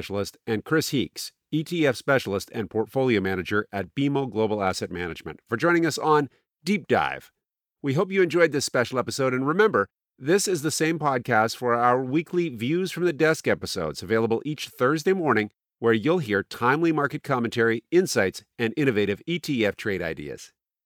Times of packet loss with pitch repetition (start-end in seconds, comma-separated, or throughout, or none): none